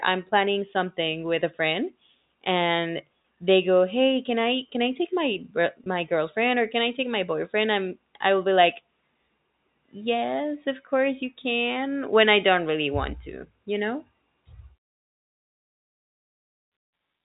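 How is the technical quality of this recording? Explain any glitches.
Two brief glitches break into an otherwise continuous speech recording carried over a G.711 telephone path, which gives it the narrow, telephone-band sound with nothing above 4 kHz.

At 3.23 s, between "with a friend and" and "they go", and again from 5.84 to 5.86 s, just before "girlfriend or can I", the speech briefly sounds held, with a slight buzzy sustain. Both are packet loss with pitch repetition. Each gap is about 20 ms, which points to a single lost packet, and the receiver filled it by repeating the last pitch period of the voice.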